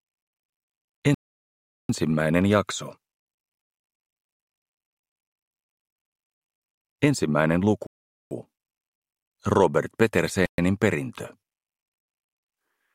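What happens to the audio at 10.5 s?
At 10.46 s the audio drops to dead silence for 125 ms, resuming at 10.58 s: a Bluetooth stall, likely caused by interference delaying packets until the headphones' buffer emptied. The waveform shows a flat gap; the spectrogram shows a clean vertical blank band.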